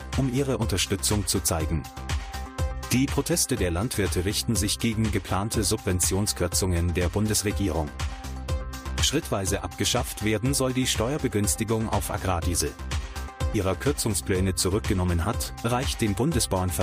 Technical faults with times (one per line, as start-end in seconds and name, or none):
13.53 stream segment skipped